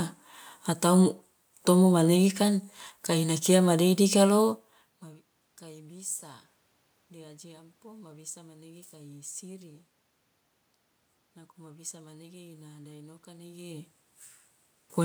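No technical faults are present in the signal; the steady room noise and the level changes near 4.5 s and again near 13.5 s, where the talker moved relative to the microphone, are part of the recording itself rather than anything the system introduced.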